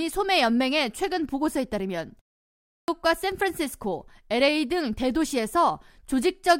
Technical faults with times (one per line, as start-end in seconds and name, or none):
2.61-2.88 clipped start after a pause